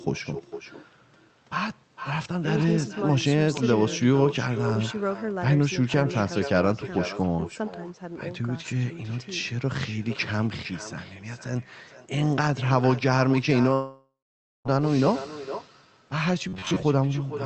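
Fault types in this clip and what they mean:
Echo with no canceller: The far end's loudspeaker feeds the microphone and nothing removes it, so every phrase returns about half a second later at about 13 dB down, thinner. A spectrogram shows each speech burst repeated as a fainter, delayed ghost.
Long network dropout: Audio stopped arriving from 13.73 to 14.67 s, likely a network outage. The last sound is stretched into a fading buzz, then roughly half a second of silence, and speech resumes with about 0.9 s missing. The waveform shows a decaying smear, then a flat gap.
Robotic sound from repeated short buffers: From 16.49 to 16.84 s the sound turns into a rigid metallic buzz at 93.8 Hz, likely from a short buffer being looped while about half the real audio is skipped. A spectrogram shows evenly spaced harmonic lines that stay fixed.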